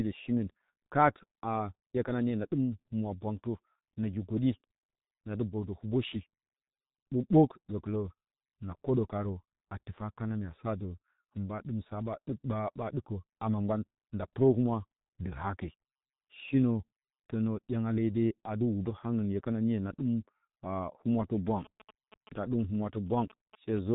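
Speech runs muffled and hoarse throughout, with smeared consonants and nothing above about 3.8 kHz. This is heavy G.723.1 codec damage: long 30 ms frames and a slowly updated voice model blur fast detail, consistent with a rate near 6 kbit/s.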